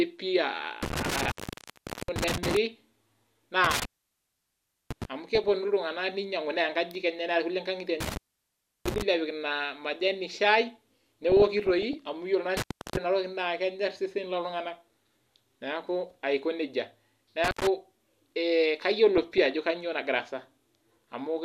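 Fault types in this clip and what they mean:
Intermittent contact: A loose plug or cable breaks the connection for a moment. The speech cuts out, with crackle at each edge and faint hiss while the line is open. It happens five times. The gaps run from 0.83 to 2.57 s, 3.64 to 5.05 s, 8.00 to 9.02 s, 12.57 to 12.97 s, and 17.44 to 17.67 s, right after "aiko neija". The longest silence lasts about 1.06 s. The shortest lasts about 0.11 s.
DAB burbling: Weak digital radio reception lets bit errors slip past error correction into the MP2 stream. Bad samples put short noise blips in single frequency bands, and bad scale factors make bands jump in level for up to a frame. It appears at 5.35 to 5.57 s, at 11.24 to 11.94 s just before "amu iyiolo", and at 19.15 to 19.56 s just before "kanyo nagira". The damage suggests an error rate of well under one percent.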